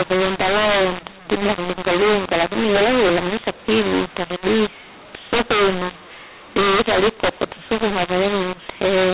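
Throughout the speech, a mu-law and A-law mix-up: samples coded as A-law are decoded as mu-law, scrambling levels and lifting near-silent samples. It sounds harsh and gritty, with hiss filling pauses. The waveform looks jagged and never settles to zero, and the spectrogram shows broadband noise up to the telephone band's 4 kHz ceiling, even in gaps.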